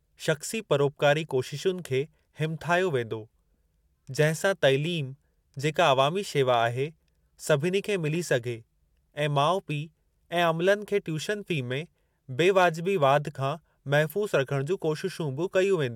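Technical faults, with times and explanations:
No technical faults detected.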